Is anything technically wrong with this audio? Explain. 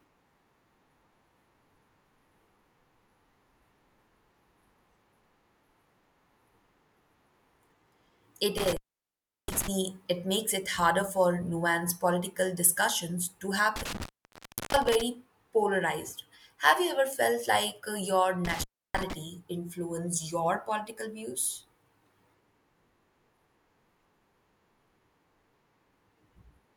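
Yes, there's an intermittent contact problem in this speech. A loose plug or cable briefly loses connection, so the signal drops out with crackle at each edge and faint hiss while it's open. It happens three times. At 8.58 to 9.68 s the line is open for about 0.71 s. At 13.76 to 15.01 s, right after "nuanced political discussions to", it's open for about 0.70 s. At 18.45 to 19.13 s, between "felt like uh your" and "influenced your political views", it's open for about 0.31 s.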